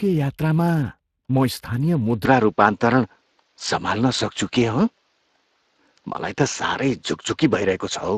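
Throughout the speech, Speex codec coding adds a plainly audible hoarse, grainy texture, consistent with roughly 22 kbps. Content stops near 15.2 kHz. From 2.25 s to the end, the sound abruptly turns duller with no gap, top band cut to 7.6 kHz, level shifted around 5 dB and a faint new noise floor, likely an input switched to a poorer device.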